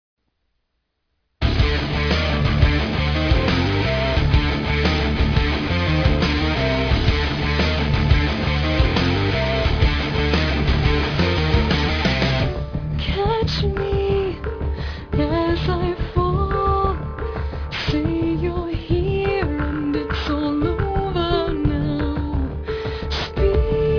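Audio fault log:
throughout, aliasing: the audio was taken down to an 11 kHz rate without a proper low-pass filter first, so everything above the new half-rate of 5.5 kHz folded back into the band below it as wrong, unrelated pitches, roughly 20 dB under the signal. Sibilant and bright content comes out gritty and metallic. On a spectrogram, energy runs hard right up to 5.5 kHz.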